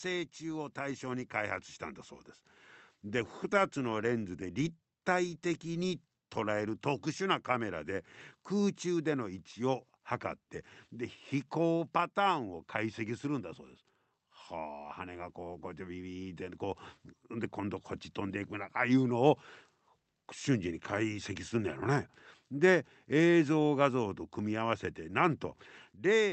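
Automatic gain rising, from 0.39 to 9.45 s and again from 14.51 to 21.31 s: the gain control judged the input too quiet and raised its level gradually, by about 7 dB and then about 5 dB, so the speech and background swell together through the call codec's roughly 8 kHz band.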